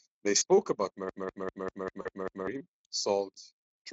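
At 0.37 to 0.43 s and again at 2.01 to 2.10 s, VoIP packet loss concealed by the speech codec. About 40 ms of audio goes missing, which fits two 20 ms frames. The Speex decoder guesses the gap from the last pitch, giving a brief buzzy or noisy smear that fades.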